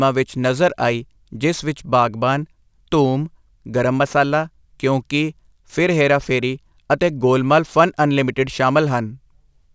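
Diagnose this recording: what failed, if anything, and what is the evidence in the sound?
Aliasing throughout, from sample-rate conversion. Sibilants sound gritty and metallic, with energy running hard up to an edge at 8 kHz and folded components roughly 25 dB below the speech. This fits a 48 kHz to 16 kHz downsample without anti-alias filtering.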